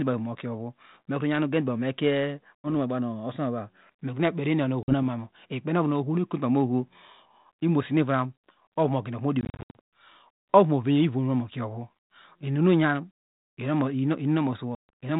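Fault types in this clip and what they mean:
Packet loss on an ADPCM call: hard-edged silent gaps of 50 to 140 ms, after which speech resumes slightly distorted until the decoder's predictor resynchronises.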